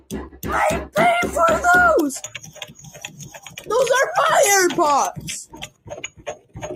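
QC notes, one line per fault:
Throughout: noise suppressor applied to music or sounds. A speech-oriented suppressor stays active for the whole clip and treats sustained content, ambience and reverb as noise, pulling them down while onsets mostly pass. The gain it applies swings by roughly 10 dB as it reacts, so the level pumps and flutters, and held material and decays thin out instead of sitting at a steady level.
0.00–0.45 s, 2.27–3.69 s, 5.46–6.59 s: sound cut by the noise suppressor. In each of these spans the suppressor classifies the sound as noise and attenuates it more heavily than the rest of the clip. The deepest drops are about 16 dB in the first span, about 11 dB in the second and about 16 dB in the third. The dips cover roughly a third of a second, a second and a half and a second respectively, and sustained or decaying parts sink or are cut short.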